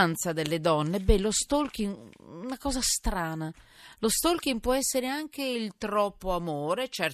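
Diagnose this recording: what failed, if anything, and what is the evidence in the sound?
Nothing failed in this recording, and the sound gives no evidence of a fault at any stage.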